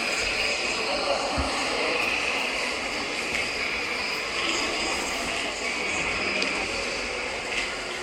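A short recording of sounds with frames out of order between 6.81 and 7.02 s. Two neighbouring blocks of about 93 ms each, consistent with runs of four frames, were decoded in swapped order, so that stretch plays its second half before its first. It comes across as a brief garbled flutter. Unlike a dropout or a repeated block, no audio goes missing or doubles and the timing stays intact.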